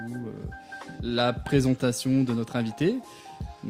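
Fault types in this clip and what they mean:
No technical faults can be heard anywhere in the signal.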